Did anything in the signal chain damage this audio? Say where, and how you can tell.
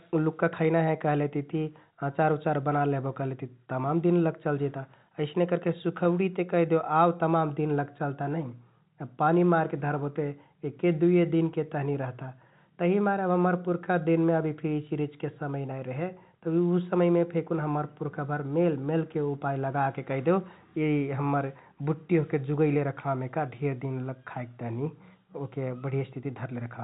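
No, nothing in the signal chain damaged this audio.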